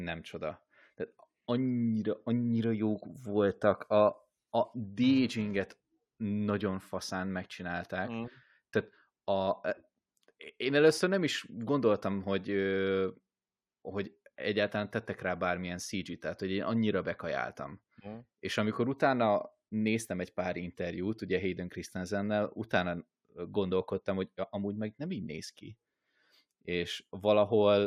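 A speech clip with a short stretch of filter restarted on every block, from 5.04 to 5.84 s, just before "nagyon faszán megcsinálták". The filter starts each block from a blank state, so every block begins with a small transient, heard as a buzz at 375 Hz that rises and falls with the speech level, which fits a 128-sample block. On a spectrogram this shows as evenly spaced horizontal lines at 375 Hz and its harmonics, and the waveform shows tiny regular spikes at each block boundary.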